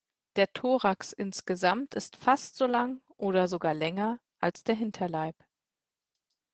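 Throughout, the speech sounds muffled, hoarse and faintly robotic: Opus voice compression at about 12 kbps, with the SILK coder holding the band near 8 kHz.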